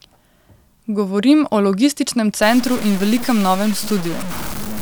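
From 2.43 s to the end, the speech turns grainy and gritty, a sign of low bit depth without dither. The distortion sits only about 15 dB below the signal and moves with it, roughening quiet syllables and sputtering or cutting to silence in the softest gaps. It fits a likely truncation to around 5 bits with no dither. Unlike a steady added hiss, this grit vanishes in silence and changes with the sound itself.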